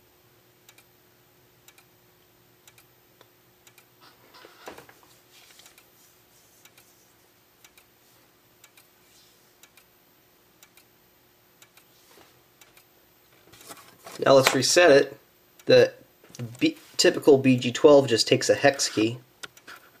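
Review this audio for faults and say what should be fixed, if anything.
Nothing here needs fixing; the signal holds steady throughout with no audible technical faults.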